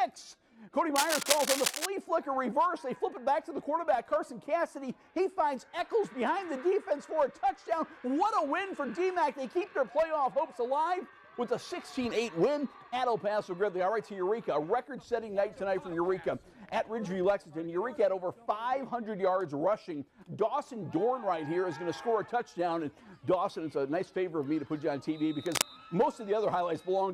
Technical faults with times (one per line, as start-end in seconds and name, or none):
0.96-1.86 cable scratch noise
25.46-25.62 cable scratch noise